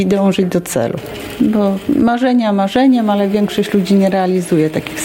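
From start to finish there's gain pumping: the level ducks hard, by around 20 dB, under each loud sound, so everything feels squashed and breathing. That's likely input gain set far too high with a fast limiter clamping down.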